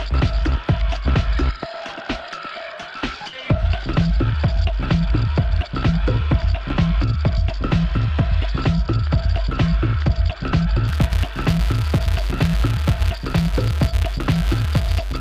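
From 10.88 s to the end, the audio carries a buzz at about 188 Hz that rises and falls with its level. This is a filter restarted on every block. It loses its state and starts each block from silence, leaving a small transient. The rate fits a 256-sample block.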